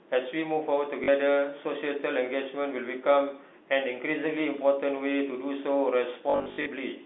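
At 1.04 to 1.08 s, and scattered across 6.3 to 6.66 s, packet loss with last packet repeated replays stale 20 ms packets, giving a brief robotic buzz.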